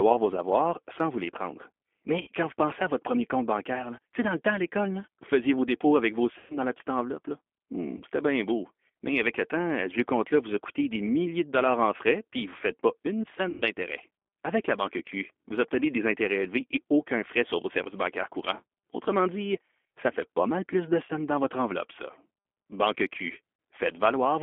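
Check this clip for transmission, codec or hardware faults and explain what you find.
Two faults are audible in this speech: G.729 codec coding over the whole clip, and five short episodes of VoIP packet loss concealed by the speech codec.

G.729 codec, throughout: the voice is rebuilt from a vocal tract filter, a pitch predictor and a few pulses per frame, so it sounds clearly rough and slightly synthetic. The sound fits an 8 kbit/s G.729A stream carried on a telephone-band line. On a spectrogram, energy sits only between about 250 Hz and 3.4 kHz, with nothing above 4 kHz and blurred, smeared harmonics.

VoIP packet loss concealed by the speech codec, at 2.21–2.29 s, 6.38–6.58 s, 7.97–8.02 s just before "c'était bien beau", 13.49–13.62 s just after "ne faites pas une", and 21.06–21.11 s between "pas mal plus de" and "dans votre enveloppe ça". About 60, 120, 30, 120 and 30 ms of audio went missing, which fits losses of one to four packets. 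The decoder filled each gap by repeating its last pitch and filter at falling gain, so the voice stretches into a buzzy tone or coloured noise that fades. Because each frame builds on the previous one, it stays weak for a moment after speech resumes. A spectrogram shows repeated spectral content that fades out, and the waveform shows a decaying envelope before the level recovers.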